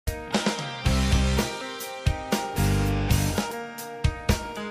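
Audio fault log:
1.61 s and 3.51 s: audio missing between chunks. The sound skips forward abruptly, about a tenth of a second dropped each time, with the two sides butted together and no gap. The 2.0 s chunk length likely reflects a recorder losing material at each chunk boundary.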